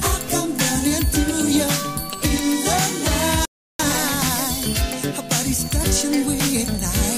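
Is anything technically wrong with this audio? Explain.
Yes. From 3.45 to 3.79 s there is a playback stall: the sound cuts out mid-flow for about 340 ms of silence, then resumes. This is likely the player running short of buffered data, or its output thread being blocked, until it recovered.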